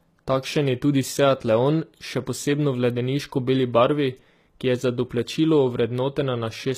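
The speech was most likely encoded with HE-AAC at a low bitrate, which fits something around 20 kbps, so only the lower spectrum was coded directly and the treble was rebuilt by copying lower bands upward. Throughout the clip the damage is plainly audible. The top end sounds synthetic, with nothing above 14.9 kHz, and the mismatched harmonics above the crossover make s sounds gritty, metallic or lispy.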